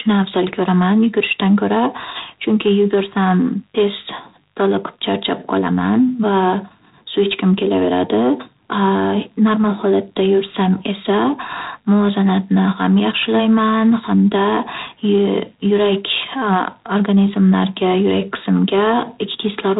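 G.726 ADPCM coding runs through the whole speech clip, sparing too few bits per sample, which fits about 24 kbit/s, leaving a harsh rasping hiss tracking level and nothing above 3.8 kHz.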